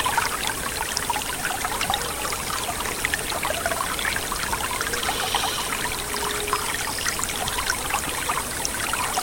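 No technical faults are audible.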